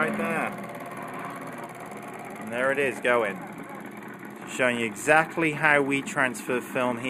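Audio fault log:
Throughout, channel delay (comb filtering): the sound has a thin, slightly hollow and phasey top end, with a fixed dip in the treble that never moves. One channel arrives roughly a tenth of a millisecond behind the other, which fits a lag of about four samples. When the two are summed to mono, content common to both cancels where they fall out of step, cutting a first notch near 5 kHz and a further one higher up around 15 kHz.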